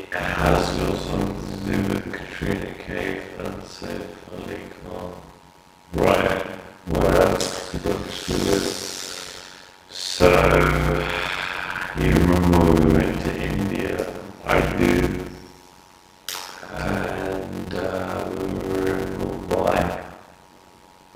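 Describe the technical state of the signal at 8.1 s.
At 8.1 s the signal has a block size mismatch (padded), which runs through the whole clip. Each block of about 256 written samples is zero-filled to a longer read size, inserting regular gaps that buzz at 91.9 Hz and slow the audio to 0.533 times its speed at near-normal pitch. The waveform shows evenly spaced flat gaps, and the spectrogram shows vertical striping with harmonics at multiples of 91.9 Hz.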